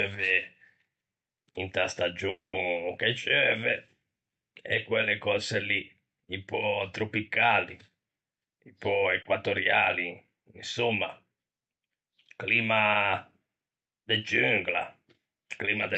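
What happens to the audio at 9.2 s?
A sound is held slightly too long with a slight buzz or dip from 9.22 to 9.28 s, a short stall from a late packet: the jitter buffer ran dry, so about 30 ms was stretched until the packet arrived, losing nothing.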